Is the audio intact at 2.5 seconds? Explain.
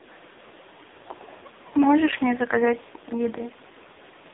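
No. At 2.5 seconds the sound carries AMR narrowband mobile codec damage, which runs through the whole clip. The codec rebuilds the voice from a vocal-tract model excited by sparse pulses, frame by frame, at a very low bit rate; the heavy buzzy, synthetic texture fits its lowest mode, around 4.75 kbps. The band is squeezed to roughly 250 Hz to 3.7 kHz, with nothing above 3.8 kHz, so the speech sounds thin and muffled.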